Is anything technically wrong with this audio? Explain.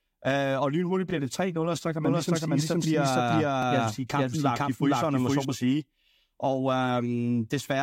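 Yes, two faults can be heard.

Overlapping chunks, at 1.10 to 1.13 s and again at 3.63 to 3.65 s. The audio was handled in 2.5-second chunks, each beginning about 21 ms before the previous one finished, so that sliver plays twice at each join and is heard as a brief click-like stutter.

Doubled audio track, from 2.05 to 5.45 s. A second full-band copy of the speech trails about half a second behind at roughly equal loudness, dry with no room colour, and it switches on and off abruptly, likely from the audio being captured again through a slower path.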